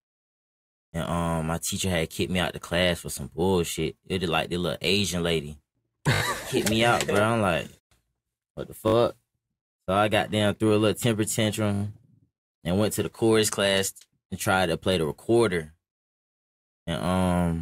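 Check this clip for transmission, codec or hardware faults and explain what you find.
Three short stutters in the speech come from a repeated buffer. They occur at 6.14 to 6.22 s, 8.88 to 8.94 s and 11.74 to 11.82 s. Each time, fresh audio reached the output late, so the device replayed its last block. The block is about 20 ms long and sounds four extra times in the first and third events and three in the second, which points to a 20 ms buffer. The result is a brief buzzy rattle with hard joins. Unlike a dropout, there is no silent gap and essentially nothing is lost.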